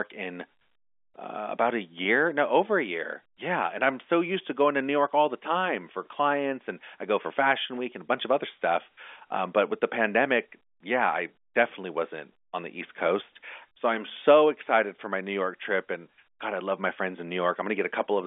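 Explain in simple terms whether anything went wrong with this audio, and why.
Two brief gaps occurred where pieces of the sound never arrived: packet loss with pitch repetition. At 2.04 s, between "uh about a" and "no over a year", about 10 ms went missing, and again from 13.69 to 13.71 s, about 20 ms. Each time the receiver filled the hole by replaying the last cycle of the voice's pitch. Both gaps are short, so each sounds like a tiny held, slightly buzzy blip. The telephone-band sound is narrow, as phone lines are.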